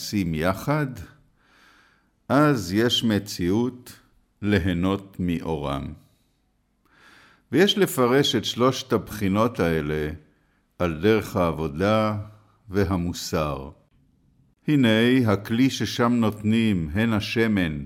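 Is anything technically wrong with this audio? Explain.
No, nothing technically wrong can be heard in this audio. Listening closely at every point reveals no fault of any kind.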